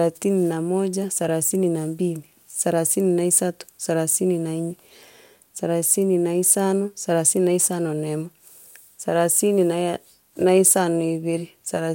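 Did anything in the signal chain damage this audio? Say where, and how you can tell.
No, nothing in the chain audibly damaged this speech, and no stage leaves a fault a listener can pick out.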